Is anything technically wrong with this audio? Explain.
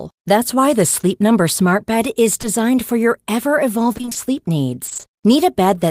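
Yes. At 2.41 to 2.45 s, just before "for your ever", the speech briefly smears, a short blur lasting about 40 ms where the sound seems to hang for an instant before recovering. This is short concealed packet loss. Roughly 20 ms of audio never arrived in time, so the receiver bridged the hole by extending the preceding sound and then cross-fading back into the real signal.

From 3.93 to 4.17 s, right after "for your ever", and again from 4.85 to 5.05 s, the speech turns choppy, taking on a stuttering texture with pieces missing. This is repeated packet loss. The pattern fits a run of short holes, each about 20 ms, falling in quick succession, roughly six in the first stretch and five in the second. The receiver kept patching each hole by continuing the last sound, so about half of each stretch is synthetic fill rather than real audio.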